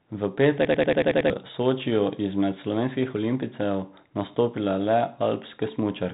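From 0.65 to 1.3 s a system hang loop occurs: the computer stalled while the sound hardware kept replaying the same 93 ms ring buffer, which fits a 4096-sample buffer. The speech stutters like a machine gun at 10.8 Hz, seven repeats, replacing about 0.7 s of audio, all within the G.726 telephone band that stops near 3.9 kHz.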